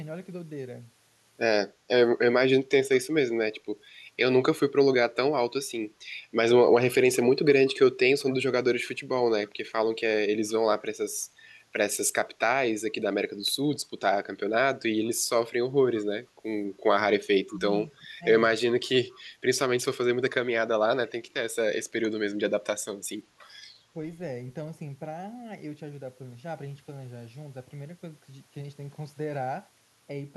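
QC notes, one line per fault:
8.21–8.36 s, echo leak: a faint copy of the speech trails 188 ms behind at about -30 dB, likely loudspeaker pickup the echo canceller failed to remove.
17.47–17.61 s, speech suppressed in double talk: the speech dips by around 10 dB for roughly 150 ms while the far side talks, likely the canceller turning both its own talker and the loudspeaker echo down.
17.48–17.56 s, echo leak: a brief 188 ms delayed copy at about -30 dB slips through during the overlap, again likely residual loudspeaker echo.
17.90–18.09 s, speech suppressed in double talk: a deeper cut of around 20 dB, roughly 150 ms in total, likely the canceller attenuating the near-end talker during overlap.
19.11–19.19 s, echo leak: a short scrap delayed 188 ms and quieter, about -35 dB below the speech, likely leftover echo from the loudspeaker path.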